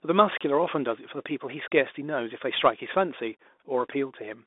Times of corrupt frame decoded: none

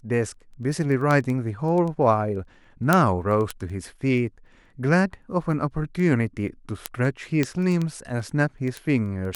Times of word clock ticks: 0.15-9.35

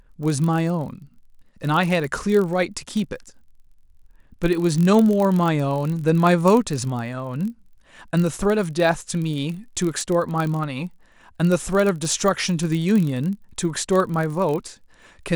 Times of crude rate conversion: none

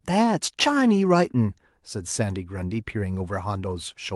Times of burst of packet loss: none

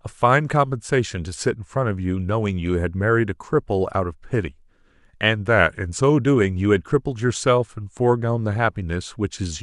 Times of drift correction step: 5.47-6.22

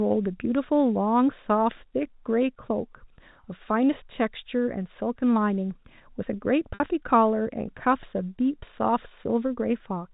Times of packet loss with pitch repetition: 6.74-6.80

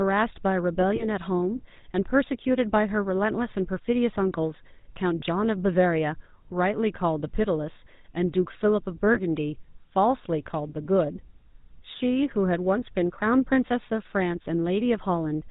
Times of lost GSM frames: 0.96-1.05, 5.20-5.23, 9.14-9.19

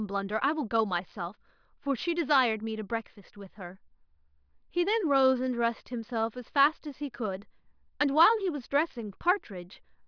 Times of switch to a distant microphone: none

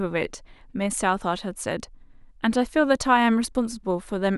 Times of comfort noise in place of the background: none

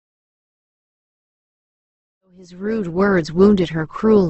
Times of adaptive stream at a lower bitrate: 1.35-4.29

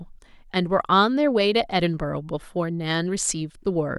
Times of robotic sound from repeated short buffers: none

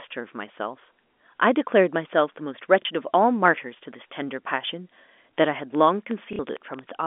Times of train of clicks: 5.75-6.90

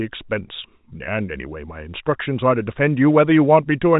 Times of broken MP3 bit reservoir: none

